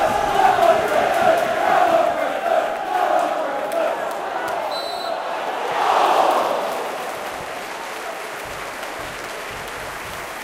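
From 7.31 s to 9.9 s the sound turns slightly dull because of channel delay (comb filtering). One channel runs about a single sample late, and when the two are summed to mono the shared content cancels where the delay puts them out of phase. With so tiny an offset, the first notch sits up near 20 kHz, so what you hear is a gentle top-end loss. The high end is thinned rather than cleanly cut, which separates it from a low-pass filter.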